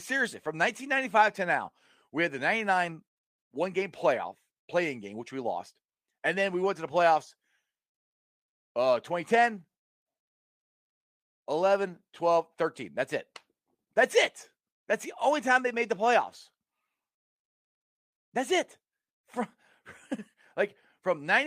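Nothing stood out as a technical fault on listening to this speech recording.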